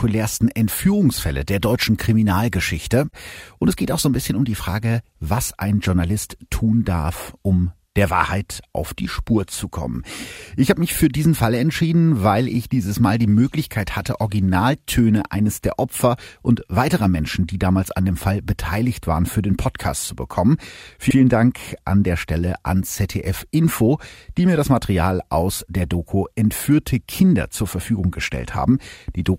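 At 21.10 s, just after "zu bekommen", repeated frames make a 64 ms stretch of speech play twice, likely two compressed frames resent. It stutters and adds time rather than dropping any.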